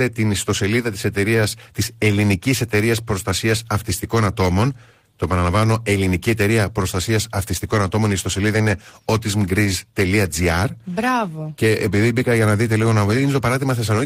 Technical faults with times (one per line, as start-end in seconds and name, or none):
none